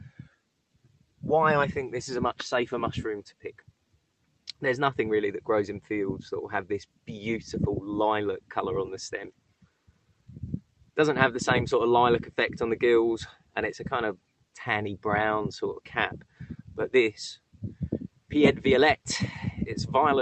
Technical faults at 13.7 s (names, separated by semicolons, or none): none